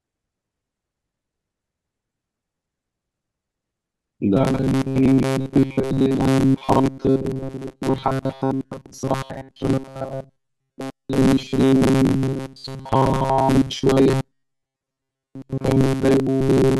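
From 4.37 s onward, speech becomes a rigid metallic 134 Hz buzz: robotic sound, likely from repeated 7.5 ms buffers replacing most real audio.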